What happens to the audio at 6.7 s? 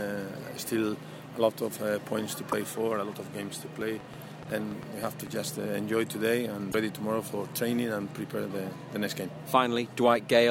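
From 6.71 to 6.75 s the sound skips ahead in a brief glitch, likely a broken MP3 bit reservoir: after frames were cut, the next frame, which fits 24 ms frames, read borrowed bits from the wrong frame. A spectrogram or waveform shows a sharp break roughly 36 ms wide.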